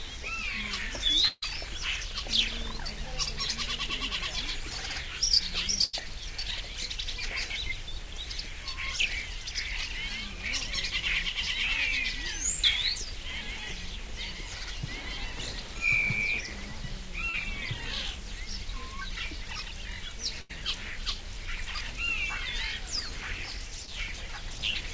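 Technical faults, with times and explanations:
1.28–1.44 s, 5.84–5.95 s and 20.41–20.51 s: burst of packet loss. The sound stretches into a held, fading continuation for about 140, 93 and 78 ms, with a brief silence of about 20 ms in the first. Several consecutive packets went missing, so the receiver extended the last audio while lowering its level, then resumed later with that stretch gone.
17.29–17.35 s and 23.85–23.89 s: short concealed packet loss. A brief smear or wobble of about 40 ms, then 20 ms, blurs the sound. A packet failed to arrive in time, and the decoder covered the hole by continuing the preceding audio before blending back into the real signal.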